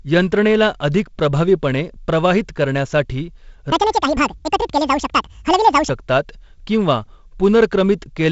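From 3.72 to 5.89 s the speech turns high and hurried, about ten semitones up: a section at the wrong speed, likely replayed at 1.98 times its recorded rate.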